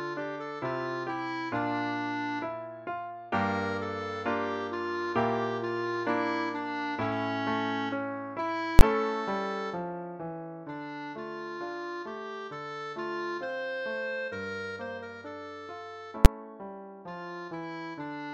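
At 8.79 s and again at 16.25 s, the sound is broken by a single loud bang, the signature of invalid numbers at full scale. A calculation produced infinite or invalid values that were forced to the largest positive or negative value, pinning the output at one extreme for about 20 ms and then about 10 ms. The blocks are too short to hear as two separate pops. On a waveform each appears as a flat rectangle at one extreme, far beyond the audio's peaks, and on a spectrogram as a bright broadband vertical stripe.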